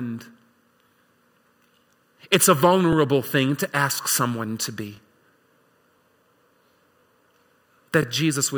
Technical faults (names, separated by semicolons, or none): overlapping chunks